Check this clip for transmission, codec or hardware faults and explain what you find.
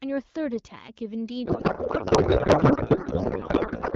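There's one real fault: a codec payload misread that starts at about 1.45 s and runs to the end of the clip. Up to that point the AMR wideband (HD Voice) speech comes through clear, which fits the 12.65 kbit/s mode. From 1.45 s the speech turns into garbled noise and warble that barely tracks it. That sounds like the receiver unpacking octet-aligned AMR frames as bandwidth-efficient, so every field is read from the wrong bits, and it never recovers.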